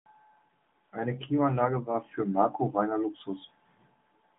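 No technical faults are present in this speech, which carries the narrow band of an AMR narrowband mobile codec working as intended: the line band runs from about 150 Hz to 3.6 kHz, nothing is heard above 3.7 kHz, and the light coding texture fits the codec's 12.2 kbps mode.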